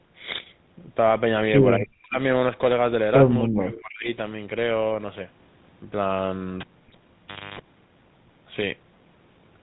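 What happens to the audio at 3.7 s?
From 3.43 to 4.08 s the speech sinks steeply, by roughly 40 dB at its deepest. This is most likely speech suppressed in double talk: with both sides talking at once, the echo canceller couldn't separate this talker from the loudspeaker echo, so it pulled the level down. Unlike a packet-loss dropout, which leaves a clean gap or a smeared, repeated fragment, this is a ducking that comes and goes while the other side is active.

Across this moment, as through the whole clip, the GSM full-rate codec is plainly audible. At about 13 kbps it rebuilds the voice from a vocal-tract model driven by sparse, regularly spaced pulses, which gives the speech its buzzy, gravelly grain. Because that roughness never lets up, it is a steady coding texture, not a dropout, and it remains underneath the dip.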